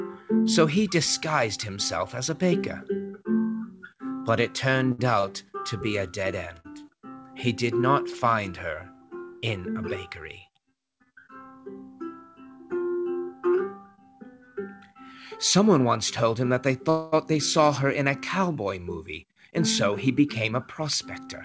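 Three short stalls from late packets come first, at 4.92 to 5.00 s, 5.20 to 5.25 s and 6.59 to 6.66 s. Each time a packet failed to reach the receiver on schedule, the jitter buffer emptied, and the last sound was stretched to cover the wait, 65 ms, 30 ms and 48 ms respectively. Playback then resumes where it left off, so nothing drops out. Instead a sound hangs on slightly too long, carrying a faint buzz or a small dip.

From 11.13 to 11.55 s comes a jitter buffer speed-up. The buffer had built up more audio than its target, so the receiver trimmed away repeated pitch-period-sized slivers, around 40 ms in total. That runs the passage at about 107% speed with the pitch unchanged, giving a brief hurried feel.

Between 16.90 and 17.14 s is a call audio freeze, likely caused by packets stalling in transit until the buffer ran dry. The receiver carries the last sound forward as a fading buzz or hiss for 225 ms without falling to silence, then picks up from the same point. 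This inserts a hold into the flow rather than cutting anything out.

A second speed-up runs from 19.92 to 21.27 s. Here the buffer shed roughly 70 ms over a longer stretch, so the sound moves along at about 104% speed, a milder but more sustained speed-up than the first.

Throughout, the G.722 call path leaves nothing above 8 kHz.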